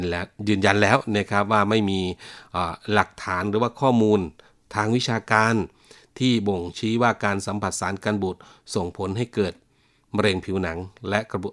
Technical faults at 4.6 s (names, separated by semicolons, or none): none